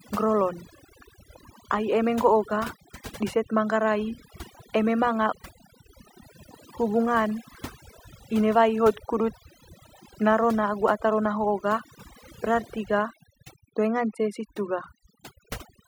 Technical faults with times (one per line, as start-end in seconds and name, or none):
0.00-15.88 overdone noise removal